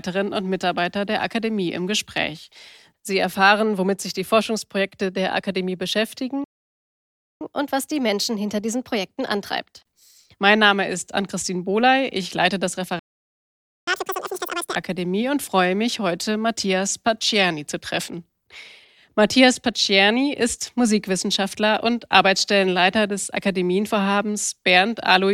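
At 6.44 s the speech halts in a playback stall lasting about 0.97 s, likely because the player ran short of buffered data. The speech then resumes after the silence. From 7.41 s to 10.41 s the player catches up at higher speed, running at 1.1 times normal rate, so the speech sounds slightly hurried and raised by roughly a semitone and a half before settling back.

After "leite das", a second stall runs from 12.99 s to 13.87 s, about 0.88 s of silence, likely from the playback thread being blocked. The catch-up that follows, from 13.87 s to 14.75 s, is far harsher, at double speed with the pitch lifted by nearly an octave, giving a brief chipmunk-like burst. Because speed and pitch both rise together and then return to normal, this is temporary resampling rather than a fixed pitch or sample-rate error.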